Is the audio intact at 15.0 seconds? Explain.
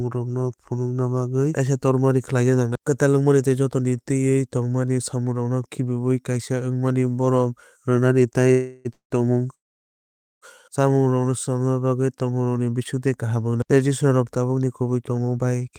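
No. A jitter buffer speed-up runs from 14.58 to 15.70 s: after excess audio built up, the receiver repeatedly cut out short pitch-period pieces, about a tenth of a second in total, so the speech plays at 109% speed with unchanged pitch and sounds hurried.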